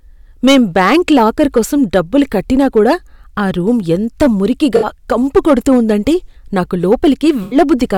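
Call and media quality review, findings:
Hard clipping throughout the speech. Peaks cut flat, giving crackle and harsh fuzz on louder syllables. Drive is about 11 dB past the limit on a small share of samples. Probable component: a gain or converter stage overloading before encode.

AAC frame loss with concealment at 4.76–4.86 s and 7.43–7.57 s. Brief smeared, phasey patches where the decoder rebuilt lost audio from the last good spectrum. Gaps of 64 ms and 85 ms, which fits three and four lost frames.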